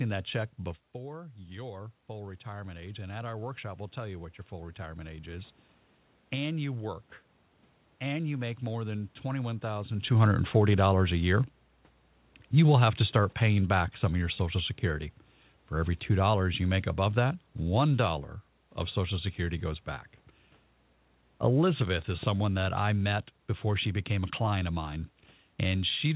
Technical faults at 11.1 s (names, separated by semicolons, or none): automatic gain falling